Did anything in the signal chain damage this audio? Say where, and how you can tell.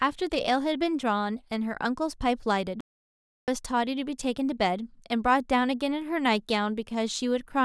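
Yes. An audio dropout to silence runs from 2.81 to 3.48 s: the speech cuts off mid-flow and returns after about 0.67 s of silence with no room tone. The waveform shows a flat line, the spectrogram a fully black band, likely from lost input upstream of the recorder.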